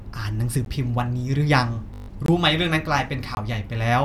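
At 0.65 s a block of digital silence lasting 14 ms replaced the speech, likely because the playback path failed to fill its output buffer in time. The signal drops straight to silence and returns with no fade, and those hard edges make the gap a sharp tick. The same fault returns at 2.26 to 2.28 s and at 3.35 to 3.37 s, each time as a hole of about 21 ms, which fits a missed 1024-sample buffer at 48 kHz. These longer gaps sound like brief pops or dropouts.

Between 1.94 and 2.08 s, wireless packets went missing or arrived late, and the receiver kept replaying its last buffer until fresh data came. This is a Bluetooth stutter. About 142 ms of audio is lost, which suggests several consecutive packets failed. The short repeating slice makes a rapid machine-gun buzz, and the speech then resumes further along, as if it had kept playing underneath.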